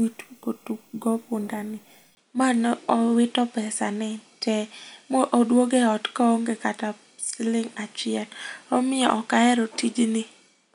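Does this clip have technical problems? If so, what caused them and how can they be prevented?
Yes. At 2.15 s the speech drops out for about 20 ms. After that it sounds duller to the end, with nothing above 10.5 kHz. Faint new background noise appears, about 45 dB below the speech, while the level stays much the same. The likely cause is an input switched to a poorer device mid-recording. Lock the recording to one chosen microphone and turn off automatic device switching.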